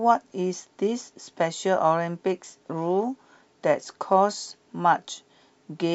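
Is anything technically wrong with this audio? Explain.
No technical faults detected.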